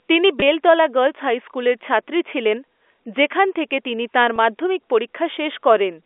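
At 0.40 to 0.42 s, a brief packet loss with pitch repetition occurs. About 20 ms of audio went missing, which fits a single lost packet. The receiver filled the hole by repeating the last pitch period. The gap is too short to fade to silence. It sounds like a tiny held, buzzy stretch. The same fault returns at 4.36 to 4.38 s, again about 20 ms long. The G.711 telephone band sits underneath throughout.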